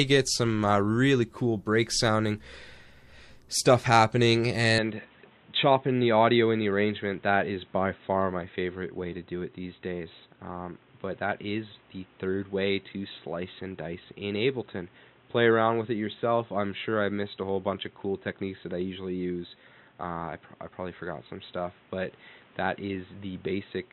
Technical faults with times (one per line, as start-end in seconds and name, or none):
4.79-23.93 input switched to a poorer device